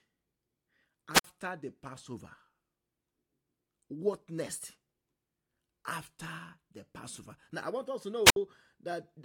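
At 1.12 to 1.24 s, and again at 8.25 to 8.36 s just after "I want us to", the speech suffers a wireless microphone squelch dropout. The radio signal fades, hiss rises, then the receiver's squelch mutes for about 51 ms and 63 ms. That burst of static before the hole distinguishes it from a clean digital dropout.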